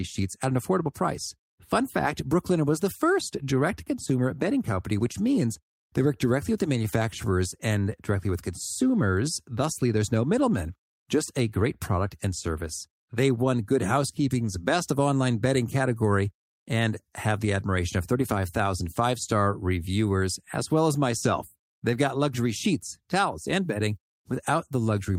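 No technical faults are audible anywhere in this speech.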